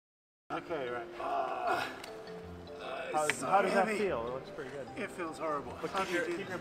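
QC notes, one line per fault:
0.00–0.50 s cut-off start: capture began late, so digital silence abruptly becomes sound in progress, with no attack; flat-line waveform, then a hard vertical spectrogram edge.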